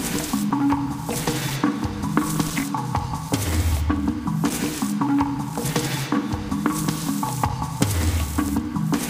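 Periodic USB or driver dropouts run from 0.51 s to 8.49 s through this recording of sounds, heard as a regular tick about once every 1.0 s. Each time, something blocking the USB bus or audio driver interrupts the stream, and a few milliseconds of audio are replaced with silence. Because the gaps are cut into the running signal, they register as clicks only where sound is present, spaced with clock-like evenness.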